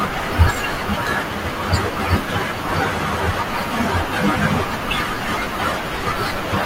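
At 0.47 s, an overlap between stream segments makes the player trim audio at a 2-second segment boundary; about 6 ms disappears, leaving a tiny skip in the speech.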